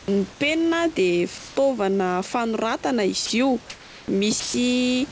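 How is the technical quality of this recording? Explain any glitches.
The speech comes through a call path that cuts everything above 8 kHz, with room noise about 24 dB below it, and it has a few short gaps.

Comfort noise in place of the background shows up at 0.32–0.40 s and 3.70–4.08 s. The real room tone turns flat and featureless, about 3 dB and 1 dB quieter. That's likely the sender going silent and the receiver filling in synthetic noise.

Sound dropped by the voice detector happens at 1.38–1.56 s, 3.26–3.30 s and 4.40–4.54 s. Bits of speech, up to 140 ms, vanish into steady noise, likely because the detector mistook the speech for background.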